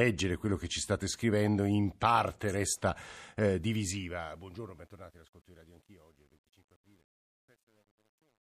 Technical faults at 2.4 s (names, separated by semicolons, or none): none